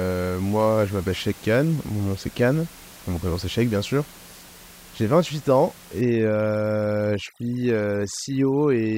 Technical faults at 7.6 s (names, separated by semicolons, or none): overdone noise removal